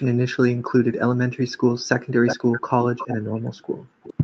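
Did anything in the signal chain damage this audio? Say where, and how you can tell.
Yes. The call's echo canceller, likely confused by both sides talking at once, applied speech suppression in double talk: the voice drops by roughly 40 dB in pieces totalling about 70 ms between 2.09 and 2.22 s, then stays suppressed from 3.21 s to the end.

The same call-processing stage shows echo leak, where a far-end loudspeaker's pickup likely slipped past cancellation and returned. A copy of the voice delayed by 363 ms surfaces at 2.26–2.37, 2.53–2.61, 2.82–3.16 and 4.03–4.14 s, about 5 to 20 dB below the speech, within the Opus path's 8 kHz band.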